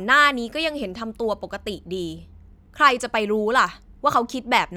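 Nothing in the speech stood out as a technical problem on listening.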